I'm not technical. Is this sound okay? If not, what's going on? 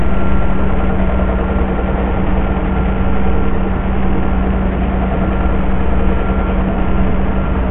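No. Bluetooth SBC compression runs through the whole clip, from start to finish. The sound sounds dull and gritty: nothing is left above about 3.7 kHz, so the crisp top end is gone, and a rough, grainy noise clings to what remains. This is likely from being sent over a Bluetooth link with too little data to spare. The codec splits the sound into bands, starves the highest ones completely, and describes the rest only crudely.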